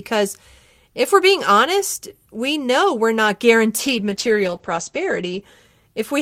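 A call bitrate drop hits this speech recording from 3.81 s to 5.49 s: the connection's bandwidth estimate collapsed and the encoder was forced onto a much smaller bit budget, consistent with a fall from around 48 kbps to about 11 kbps. With so few bits, the voice is coded coarsely and sounds rough and watery, and the audio bandwidth narrows from 20 kHz to 8 kHz, leaving it muffled for roughly 1.6 s until quality returns.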